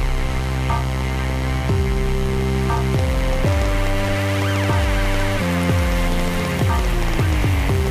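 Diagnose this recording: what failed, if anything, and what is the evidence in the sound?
A train of clicks runs from 2.77 s to 7.88 s, about 5.9 per second at uneven spacing, roughly thirty in all. Each is a similar sharp tick that stands well above the programme, peaking around 10 dB over it, and the clicks continue through quieter passages. Their repeated shape and irregular pace point to an external pulse source, likely interference coupling into the analogue wiring or an interface intermittently failing to deliver clean samples.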